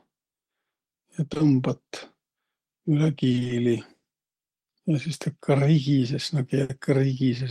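A speech recording with three kinds of network damage. Just after 1.33 s and again at 1.37 s there are two tiny smears back to back, a brief wobble where the sound blurs for an instant rather than breaking. This is short concealed packet loss. Each time, about 20 ms of audio failed to arrive in time, and the decoder bridged the hole by extending the preceding sound before blending back into the real signal, so the missing piece is hidden rather than silent. From 3.31 to 3.51 s the speech turns choppy, with pieces missing. That is repeated packet loss: five separate gaps, none longer than 20 ms, fell within that fifth of a second, so half the stretch is synthesized fill. Each patch had barely ended before the next loss began, and the chain of short extrapolations gives the choppy texture. At 6.63 s there is a single longer dropout lasting until 6.71 s, where the sound hangs and fades briefly before the speech picks up further along. 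This is a burst of packet loss. About 60 ms went missing at once, and the receiver stretched the last sound while turning it down across the gap, so the real content from that moment is simply gone.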